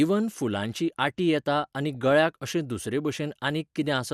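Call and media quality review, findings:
MP2 compression, whole clip: dull top end, gurgling granular texture on the speech. Likely cause: MPEG Layer II at a low rate, consistent with about 80 kbps. Upper sub-bands dropping out and flickering; surviving bands coarsely quantised.

DAB burbling, 1.89–1.96 s, after "फुलांची आटी येता आनी", before "गळ्याक अशें": brief burbling. Residual bit errors passing error correction into the MP2 stream; corrupted samples put short noise blips in single sub-bands.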